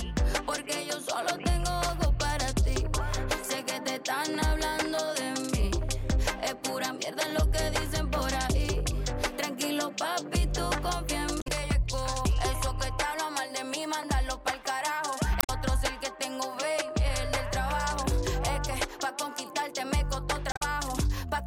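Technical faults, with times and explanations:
11.38–11.47 s, 15.37–15.49 s and 20.49–20.62 s: damaged data in a compressed stream. Each brief burst is a glitch, as the decoder misreads corrupted frames before regaining sync.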